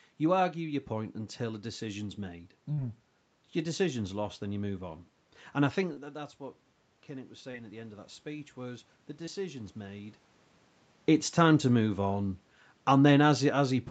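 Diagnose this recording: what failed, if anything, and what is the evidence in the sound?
Short concealed packet loss at the network and jitter-buffer stage: brief smears at 2.73, 5.93, 7.51 and 9.26 s, each a few tens of milliseconds. Packets arrived too late or never, and the decoder extrapolated the preceding sound before crossfading back into real audio.

Automatic gain rising in the call processing: from 7.07 to 10.23 s the level and room noise swell together. The input dropped about 13 dB, and the gain control responded by slowly raising its gain about 5 dB, so the recovery is only partial.

Automatic gain falling, also in call processing: from 11.39 s to the end, the sound sinks along with its background. The gain control judged the input too loud or its background noise too strong and pulled its gain down gradually rather than instantly.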